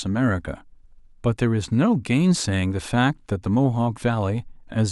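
No technical faults are audible anywhere in the speech.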